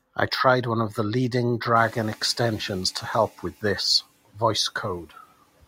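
Speech recording with a noise suppressor catching up after "one of the leading": background noise jumps around 2 s, passes through under-reduced from 1.75 to 2.24 s, then sinks by about 7 dB as the estimate adapts over 490 ms.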